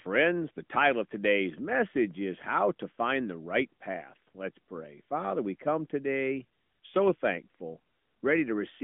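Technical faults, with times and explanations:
Throughout – AMR narrowband mobile codec: the speech has passed through the narrowband mobile codec, which squeezes each 20 ms frame into a vocal-tract filter driven by a few pulses. The plainly audible buzzy, synthetic texture fits a mid-rate mode near 10.2 kbps. Nothing survives above 3.6 kHz, and the telephone band runs from 150 Hz to 3.4 kHz, so on a spectrogram the energy stops at a flat ceiling with an empty strip below 150 Hz.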